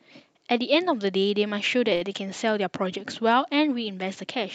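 Speech carried over a call codec, with the top end rolled off at 8 kHz, has a short stall from a late packet between 1.95 and 2.13 s. The jitter buffer ran dry, so the last sound is held for roughly 58 ms of fill, then resumes exactly where it stopped. Packet loss leaves a gap or skips ahead, but here nothing is missing. A sound just lingers too long with a faint buzz or dip.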